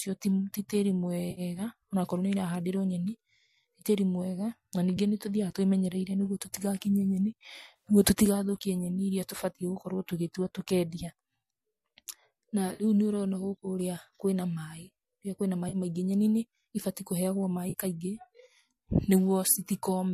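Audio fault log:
1.31–1.41 s, 4.97 s, 7.76–7.87 s, 12.75–12.84 s, 15.69–15.76 s, 17.70–17.75 s: AAC frame loss with concealment. Brief smeared, hissy, phasey patches break into the speech. The first follows "ti tĩri", the third "tũtigakinye nyeni", and the last "nyeni nĩbatiĩ kũheagwo". Each gap runs about 10 to 70 ms. Around 7.8 s the damage is scattered, with the longest run about 40 ms. Missing AAC frames were patched from the previous good spectrum with randomised phase, so each gap is filled with noisy, blurred sound instead of silence. The faint graininess throughout is likely the light low-delay AAC coding at 64 kbps.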